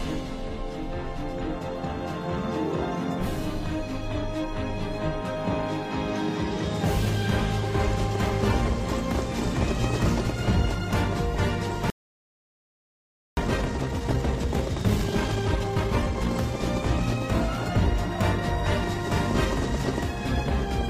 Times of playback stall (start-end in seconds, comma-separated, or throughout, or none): 11.90-13.37